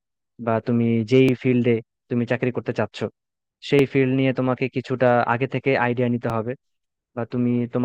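At 1.29, 3.79 and 6.30 seconds the speech jumps with a brief click-like stutter, the mark of overlapping chunks: the audio was handled in 2.5-second blocks, and each new block begins about 6.5 ms before the previous one finished, so that sliver plays twice at every join. Unlike a dropout, nothing is missing; unlike random clicks, the stutters fall at an exact 2.5-second spacing.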